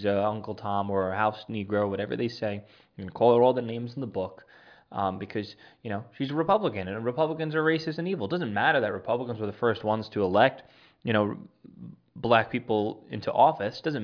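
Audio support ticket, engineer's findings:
Nothing stood out on listening; no findings to log against this speech clip.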